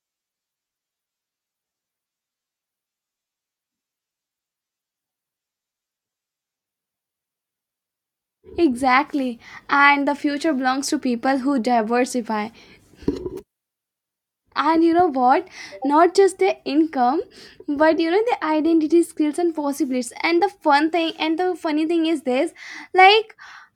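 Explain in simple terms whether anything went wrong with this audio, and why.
Nothing went wrong with this recording: the speech signal arrives intact and steady, with no dropouts, glitches or distortion at any point.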